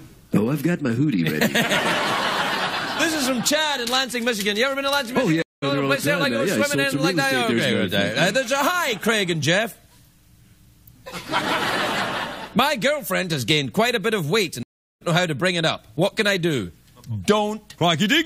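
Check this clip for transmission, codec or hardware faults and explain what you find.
Two stream reconnects occur. The first spans 5.42 to 5.64 s, with 198 ms of silence. The second spans 14.63 to 15.03 s, with 378 ms of silence. Each time, the connection dropped and a fresh decoder restarted mid-stream. The sound resumes roughly a fifth of a second later, skipping a short stretch.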